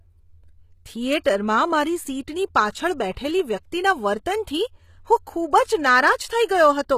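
A speech recording that was likely squeezed through HE-AAC compression at a very low rate, consistent with around 20 kbps. The encoder rebuilds the treble by copying lower bands upward, so sibilants sound gritty and lispy, the damage is plainly audible, and nothing sits above 14.9 kHz. There is also pre-echo at 1.24 s, just before "મારી સીટની પાછળ બેઠેલી". The codec's quantisation noise spilled backward ahead of a sharp onset, so a brief hiss of about 17 ms comes before the attack and softens it.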